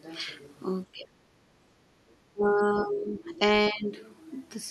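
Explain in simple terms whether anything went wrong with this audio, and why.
Speech suppressed in double talk happens at 0.92 to 1.14 s, 2.32 to 3.4 s and 3.7 to 3.9 s, where the voice suddenly drops much quieter. The likely cause is both people talking at once, so the echo canceller turned everything down.

The other side's voice is leaking through from 2.62 to 3.01 s as a faint second voice underneath. This is likely because the echo canceller did not fully remove the far end's loudspeaker sound from the microphone.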